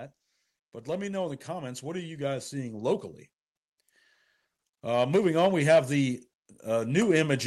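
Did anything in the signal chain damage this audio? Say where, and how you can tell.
Yes, and it's in the call processing stage: automatic gain rising, twice. From 0.71 to 3.09 s the level creeps up by about 6 dB, and it starts climbing again at 4.84 s and keeps going to the end. The giveaway is that the background swells right along with the speech, so it isn't the talker getting louder. The AGC judged the input too quiet and ramped its gain up slowly over a couple of seconds each time.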